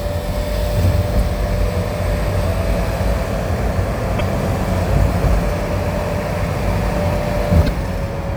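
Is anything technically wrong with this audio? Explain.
Yes, there's damaged data in the compressed stream, and it shows up three times: 1.16 to 1.21 s, 4.17 to 4.21 s, and 7.64 to 7.69 s. Each is a brief glitch of about 44 ms. What's going on is that a stretch of the encoded bytes got corrupted, so the decoder misreads those frames, loses its place, and hunts for the next valid frame header. You hear that as a chirp, squawk, click or short hole cutting into the sound.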